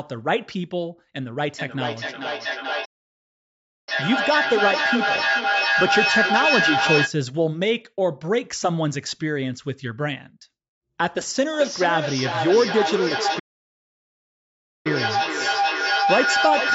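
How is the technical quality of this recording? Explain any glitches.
The recording has two clear problems: a feedback echo between two devices that shows up twice, and two playback stalls.

The echo runs from 1.38 to 7.17 s and again from 11.53 s to the end of the clip. Two devices in the same room are on the call, so one device's speaker plays back the other's microphone feed, and that microphone picks it up again. Each echo canceller only removes what its own device plays, so nothing stops the loop. You hear the speech come back roughly every 400 ms. The repeats get as loud as the original speech, about 0 dB, so they stack up into a ringing smear instead of dying away.

The playback stalls fall inside those echo stretches, at 2.85 to 3.89 s (about 1.02 s) and 13.39 to 14.87 s (about 1.46 s). The speech simply cuts to silence partway through and then picks up again. The likely cause is the player running out of buffered data, or its thread getting blocked, so the output had nothing to play until it recovered. 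Both gaps are long enough to be obvious.

The call's microphone processing also shows in the audio. Its high-pass filter takes out the lowest bass, which is normal and not a fault.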